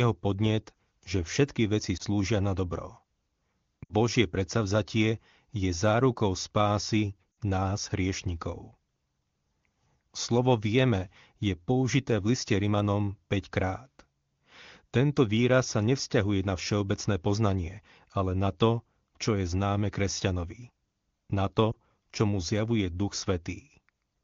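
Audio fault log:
1.97–2.02 s, 3.84–3.94 s, 7.32–7.37 s and 21.71–21.75 s: lost AMR speech frames. Corrupted frames failed their check, so the decoder filled the gap with the last good pitch and vocal tract settings at falling gain. The short gaps at 1.97 s and 21.71 s fit one 20 ms frame. Each gives a quick dip. The other two fit about 60 ms of loss. There the speech smears and fades before it returns rough. Between gaps, the wideband codec is clean.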